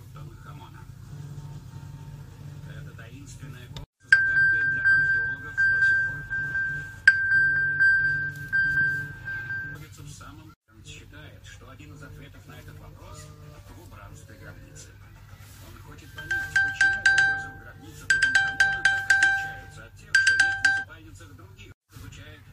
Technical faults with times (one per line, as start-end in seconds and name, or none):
9.74 stream segment skipped